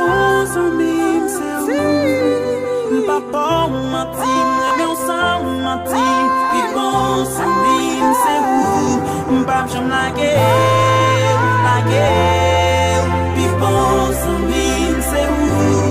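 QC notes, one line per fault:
4.68–4.71 s, Bluetooth stutter: a short slice of the sound gets replayed back-to-back for about 29 ms, giving a quick buzzy hiccup, which fits a couple of late or lost packets. The audio then picks up further along, so that bit's skipped.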